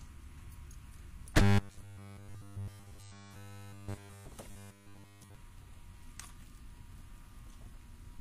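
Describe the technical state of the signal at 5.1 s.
At 5.1 s the sound carries a robotic buzz from 4.51 to 5.35 s, likely from repeated short buffers: a roughly 10 ms slice looping entirely, forcing a rigid 100 Hz metallic tone. A spectrogram shows evenly spaced 100 Hz harmonic stripes, and the waveform shows identical 10 ms cycles.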